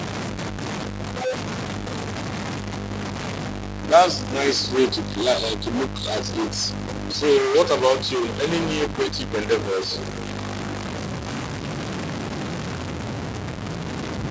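Throughout, distortion coats the speech and fills pauses with noise, likely a stuck bit; the spectrogram shows broadband smear reaching the 8 kHz call-band limit.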